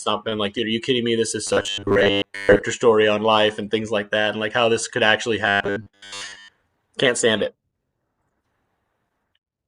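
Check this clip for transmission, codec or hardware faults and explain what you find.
The speech has one fault, occurring twice: robotic sound from repeated short buffers, from 1.47 to 2.63 s and from 5.46 to 6.49 s. A rigid, metallic 100 Hz buzz runs through the voice while still loosely following the words. The likely cause is that audio arrived too seldom and the player replayed roughly 10 ms blocks, skipping most of the real signal. A spectrogram would show flat, evenly spaced harmonics at multiples of 100 Hz, and the waveform would show a pattern repeating every 10 ms.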